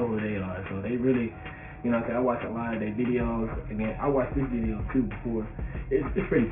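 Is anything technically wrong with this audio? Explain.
Yes. Aliasing runs throughout: content above 3 kHz folds back as unrelated metallic tones, which fits a 6 kHz resample without filtering. Mere band-limiting would only dull the audio.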